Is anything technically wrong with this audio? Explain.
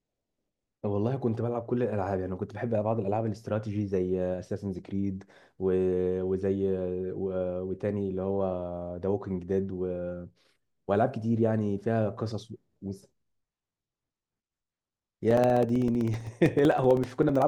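Yes. From 15.31 s to 17.42 s there are periodic USB or driver dropouts. Every 64 ms, about 15 times per second, a short slice of the speech, roughly 2 ms, is lost and replaced by silence, which adds up to around thirty gaps. This evenly spaced pattern points to a background task repeatedly stalling the USB transfer or the audio driver. The result is a steady train of ticks riding on the speech, audible only while sound is present.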